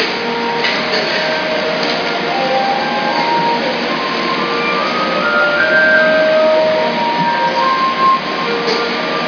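Nothing goes wrong technically anywhere in these sounds; there's simply no fault to point to from the first moment to the last.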